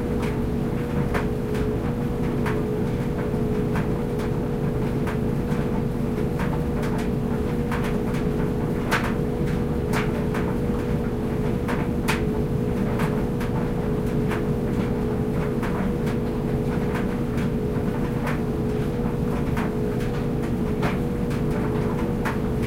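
Nothing here stands out as a technical fault, so these everyday sounds can just be taken as they come.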